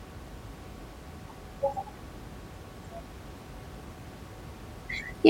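Nothing goes wrong with this speech on the technical side; all you hear underneath is some ordinary room noise sitting about 18 dB below the talking, and that belongs to the recording space rather than to the system.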